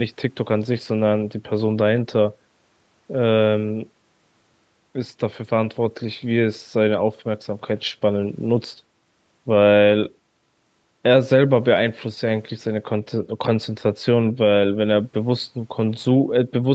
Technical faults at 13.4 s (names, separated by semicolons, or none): none